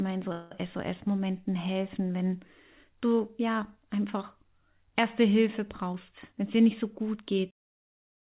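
Right at the start, from 0.32 to 0.53 s, there's a call audio freeze: the speech stalls and the last sound is stretched into a fading buzz for about 190 ms, then picks up exactly where it left off. That's most likely delayed packets draining the jitter buffer, so nothing's lost, just a gap pushed in.

Later, from 5.92 to 8.01 s, you get a jitter buffer speed-up. The receiver is trimming tiny pitch-period slices over and over to shed excess buffered delay, about a fifth of a second in total, so the speech runs roughly 9% faster at unchanged pitch and sounds a bit rushed.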